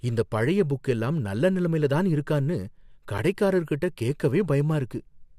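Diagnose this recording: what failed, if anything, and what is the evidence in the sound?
A brief hard-edged silence cuts the speech at 3.18 s: a gap between stream segments, where mismatched segment timestamps at playback leave a 10 ms hole filled with silence, adding 8.5 ms to the stream.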